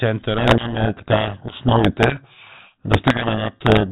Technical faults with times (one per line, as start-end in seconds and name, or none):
0.38-3.92 codec payload misread